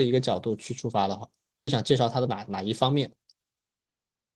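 At 1.67 to 1.69 s a skip ahead occurs: a stretch of about 0.7 s of speech was discarded, either lost in transit or dropped by an overflowing jitter buffer, while later audio was already queued. Nothing was inserted to cover the hole, so the speech before and after the cut is joined almost directly. The listener hears an abrupt forward jump with no pause, as though part of the utterance was clipped out.

From 1.91 to 3.64 s a jitter buffer speed-up follows. The buffer was holding more audio than its target, so the receiver trimmed it down by repeatedly cutting out very short segments one or a few pitch periods long, removing roughly a fifth of a second in total. Playback runs at about 112% speed while the pitch stays unchanged, so the speech over this stretch sounds noticeably hurried and slightly compressed in rhythm.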